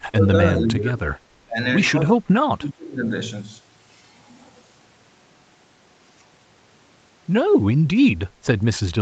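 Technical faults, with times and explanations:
0.00–0.35 s, 0.52–1.02 s, 1.44–1.58 s and 2.58–3.09 s, speech suppressed in double talk: The speech dips sharply four times in about the first three seconds. The deepest drop is about 30 dB at the start, and the others are about 20 to 25 dB. The likely cause is the far side talking at the same moment. The echo canceller could not tell this talker apart from its own loudspeaker echo, so it turned everything down.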